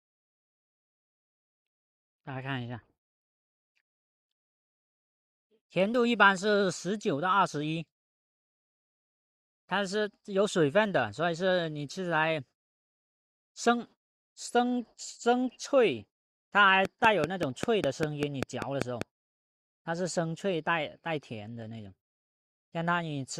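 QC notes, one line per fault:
16.85 to 19.03 s: train of clicks, about ten near-identical pulses at a steady 5.1 per second, peaking around 15 dB above the sound; the even spacing and matching shape set it apart from random crackle, likely from interference from nearby equipment.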